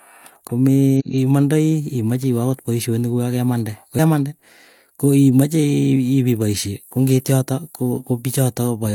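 Damaged data in a compressed stream breaks the speech twice, first from 0.96 to 1.03 s and again from 3.95 to 4.00 s. In each spot some of the encoded bytes are wrong, so the decoder cannot read those frames properly, loses its place and hunts for the next valid frame header. The speech gives way to a short chirp, squawk, click or brief hole, about 74 ms and 50 ms long, before clean decoding resumes.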